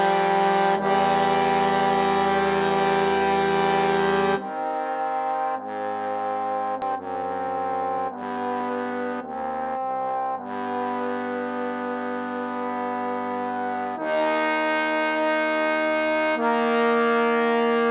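Skip ahead at 6.82 to 6.84 s: roughly a second of audio is missing, and playback jumps straight to later material with no fill. A stretch was dropped, either in transit or by an overflowing jitter buffer, while later audio was already queued, so the two sides join almost directly. Jitter buffer speed-up from 6.92 to 9.44 s: the audio runs at about 108% speed with unchanged pitch and sounds hurried. The receiver was holding more audio than its target and repeatedly cut out pitch-period-sized pieces, about a fifth of a second in total, to reduce the delay. Throughout, nothing is heard above 4 kHz, which fits the narrowband G.711 mu-law call codec at 64 kbps, with its usual coding noise.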